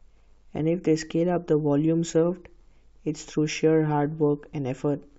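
Speech, with no technical fault to be heard. There is nothing here that needs a time or a cause.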